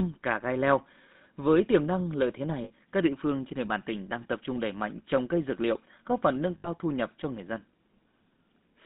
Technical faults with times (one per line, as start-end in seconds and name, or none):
0.00-8.86 GSM full-rate codec
2.64-2.71 lost GSM frames
6.58-6.68 lost GSM frames